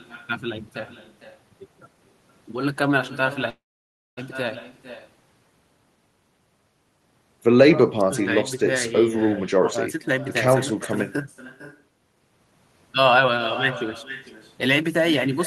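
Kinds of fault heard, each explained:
Echo with no canceller: the far end's loudspeaker feeds its microphone and nothing removes the pickup, so the speech returns after roughly half a second as a thinner copy about 14 dB below the original, shadowing the talker throughout the clip.
Call audio freeze: from 3.49 to 4.19 s the audio stalls, with the last sound carried briefly before about 0.59 s of silence, then resumes where it stopped. Nothing is lost, but 0.68 s of gap is inserted, likely from delayed packets draining the jitter buffer.
Jitter buffer speed-up: the receiver trims short pitch-period slices to shed excess buffered delay, so speech runs faster at unchanged pitch. It happens at 9.43 to 10.13 s (112 %), 12.16 to 13.34 s (107 %) and 14.66 to 15.41 s (105 %), each sounding hurried.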